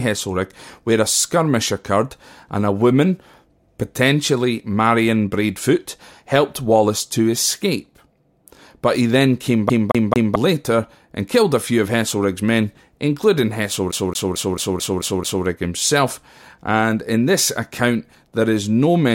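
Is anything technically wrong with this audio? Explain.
Yes. CD stuck on one turn, after "he then came" (9.70–10.36 s, three repeats) and after "men including" (13.92–15.46 s, seven repeats, before "himself and in this"). A scratch keeps throwing the laser back a track, so the same 0.22 s of speech stutters with brief mutes, showing as identical repeating waveform blocks with thin gaps.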